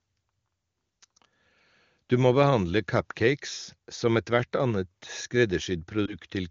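Speech carried over AMR wideband (HD Voice) at a quality that fits the top 23.85 kbit/s rate, with a lost AMR speech frame at 6.06 to 6.16 s: the decoder conceals it by repeating earlier pitch and spectral settings at reduced gain, producing a brief dip or warble consistent with one dropped 20 ms frame.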